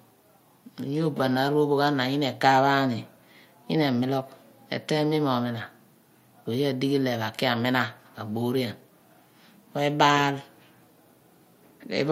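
Speech recording, with no audible technical fault anywhere in it.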